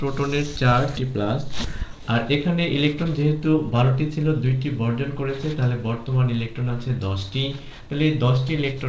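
At 0.97 s there is a skip ahead. About half a second of audio is simply dropped. The two sides join almost directly, with no gap. From 2.89 to 4.45 s a jitter buffer speed-up runs the audio at 109% speed. Around 150 ms of short pitch-period pieces are removed, so it sounds hurried at unchanged pitch. Throughout, the G.722 call path leaves nothing above 8 kHz.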